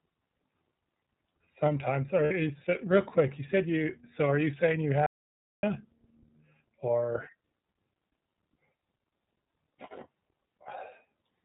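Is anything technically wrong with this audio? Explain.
Yes. The speech has been through the iLBC codec and has two separate interruptions.

iLBC codec damage runs through the whole clip and is plainly audible. Nothing above 4 kHz survives, so the speech sounds narrowband and boxed-in, with a slightly rough, synthetic edge. iLBC codes each frame's excitation independently at a low rate; the texture here fits 30 ms frames at around 13 kbps. Unlike the two gaps below, this damage never stops. It colours the speech throughout rather than breaking the flow.

Lost iLBC frames occur from 2.25 to 2.32 s, a 60 ms gap just before "you s real quick". The decoder covered the missing audio by repeating the last pitch cycle mixed with noise, which fits two lost 30 ms frames. The result is a brief held, buzzy vowel-like smear rather than silence. Because each iLBC frame stands alone, the speech snaps back to normal immediately afterwards. 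That filled gap is what sets it apart from the dropout.

An audio dropout to silence runs from 5.06 to 5.63 s, about 0.57 s, right after "are you saying you". The sound cuts off mid-flow into silence, with no room tone and no concealment fill, then resumes abruptly. Whatever was said in that stretch is gone. The likely cause is lost input, such as a disconnected device, a failed link or a stray mute, while the recorder kept writing silence. The dead-flat gap distinguishes it from the buzzy packet-loss patch.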